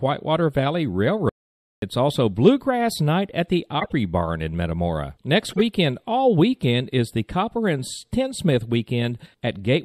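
Throughout the speech there is plainly audible MP3 compression damage: a watery, swirling texture where weak spectral detail flickers in and out between frames. This is likely the result of an encoder starved of bits, consistent with a rate around 64 kbps.

From 1.29 to 1.82 s the sound cuts to complete silence for about 0.53 s, with no room tone underneath, then resumes mid-flow. This is an audio dropout to silence, likely caused by the input being lost while recording continued.

At 3.79 to 3.92 s and again at 5.51 to 5.61 s, a corrupt frame was decoded. A handful of consecutive damaged compressed frames were played as if valid, so energy lands at wrong frequencies for each span and is heard as a short spurious artefact.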